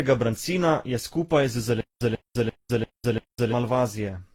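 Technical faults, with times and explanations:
Throughout: transcoding between lossy codecs. Artefacts from several encoders are layered together, and nothing is present above 18.5 kHz. The likely chain is Vorbis, then Opus, then HE-AAC.
1.81–3.52 s: stutter with silent gaps. A 140 ms fragment repeats five times every 344 ms, with 204 ms of digital silence between. This is likely a stalled stream replaying its last fragment.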